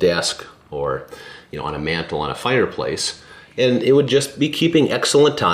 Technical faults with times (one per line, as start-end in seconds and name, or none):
none